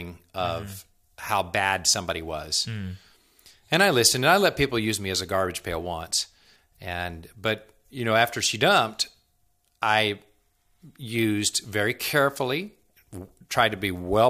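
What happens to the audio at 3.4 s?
Nothing goes wrong at 3.4 s; the speech there plays through intact, with no dropout, click, distortion or glitch.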